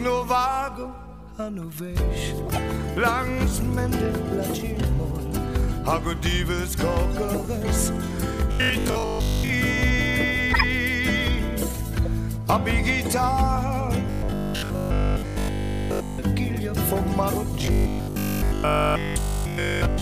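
At 2.46 to 2.58 s, 10.52 to 10.64 s and 12.05 s, a corrupt frame decoded gives brief chirps and noise bursts. The decoder played damaged data, misplacing energy in frequency. Unlike the robotic fault, each is a one-off blip that does not repeat.

From 8.52 to 9.50 s, 14.07 to 16.19 s and 17.62 s to the end, the audio turns into a rigid, metallic 50 Hz buzz, robotic sound likely from repeated short buffers of about 20 ms. Most of the audio in the first and last spans is replaced by these repeats, and all of it in the middle span. The buzz sets it apart from the corrupt frames: it holds one fixed pitch for the whole span.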